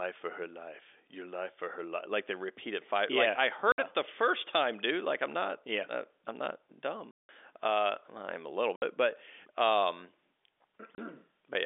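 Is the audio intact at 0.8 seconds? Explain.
Yes, the audio is intact at 0.8 seconds: the speech there carries only the narrow telephone band of G.711 A-law coding, with no dropout, click or distortion at that moment.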